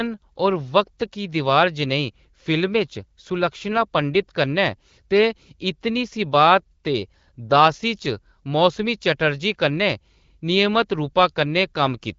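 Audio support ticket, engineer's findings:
No audible faults found in this speech clip.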